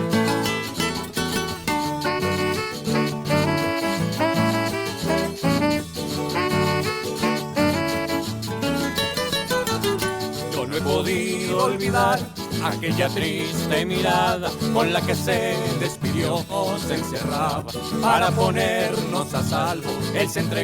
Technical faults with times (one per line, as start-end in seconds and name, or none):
16.49-16.55 stream segment skipped